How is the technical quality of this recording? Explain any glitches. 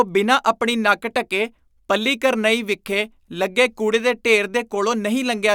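No glitches turn up anywhere in this speech recording. Nothing interrupts or disturbs the signal at any point.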